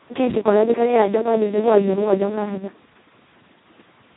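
Speex codec damage runs throughout the speech. The CELP excitation is starved of bits, which fits the lowest, near-vocoder setting at roughly 2 kbps, so the voice sounds hoarse, noisy and robotic, and nothing remains above 3.9 kHz, leaving it muffled.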